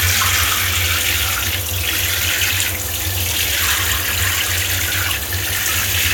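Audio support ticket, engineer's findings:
USB whine from 1.02 s to end. Fixed-pitch tone on a 1 kHz fundamental, strongest at the 12 kHz harmonic, roughly 15 dB under the sound. Cause: 1 ms USB frame current leaking via power/ground. Not mains hum: spacing is 1 kHz, not 50/60 Hz.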